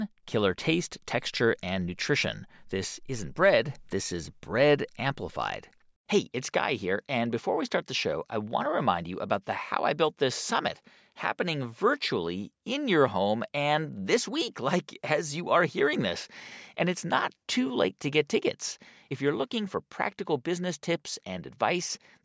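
Speech recording with no audible technical faults.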